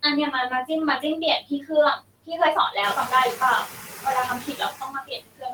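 Noise suppressor artifacts run through the whole clip. The suppressor pulls down the bands it judges to be steady noise, frame by frame, so the background sinks in pauses and swells under speech. A spectrogram shows a blotchy, speckled noise floor.

Speech cut by the noise suppressor occurs at 1.41–1.71 s, 1.97–2.31 s, 3.67–4.05 s, and from 4.4 s to the end. Each time, the suppressor treated parts of speech as noise, dropping them by up to about 17, 22, 13 and 22 dB. Those stretches sound swallowed and faint, appearing as sudden dips in the waveform envelope and thinned harmonics on the spectrogram. Meanwhile the room noise steps up by about 13 dB near 3 s, settling about 12 dB below speech.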